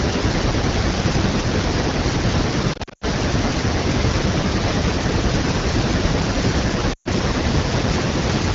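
Speech over AMR wideband (HD Voice) shows lost AMR speech frames at 2.73–3.04 s, scattered losses with runs up to 80 ms, and 6.94–7.08 s. Concealment repeats stale pitch with falling gain, so the spectrogram shows smeared, fading harmonics and the waveform dips before recovering.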